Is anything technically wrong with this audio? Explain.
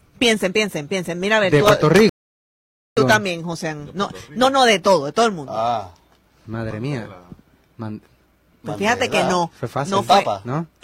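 Yes. From 2.09 to 2.97 s there is a rebuffering stall: the player's buffer ran dry, producing 875 ms of silence before playback resumes exactly where it stopped, with nothing missing.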